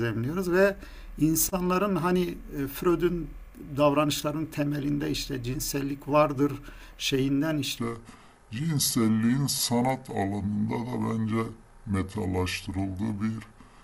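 DAB burbling strikes at 4.53 s and again from 6.91 to 7.09 s: bit errors from weak reception slip past error correction into the MP2 data, so wrong samples put short blips of noise into individual sub-bands over the speech.

A section at the wrong speed runs from 7.78 s to the end: playback at 0.741 times the original rate drops pitch by about five semitones and drags the speech deep and slow, likely from a player or editor locked to the wrong clock.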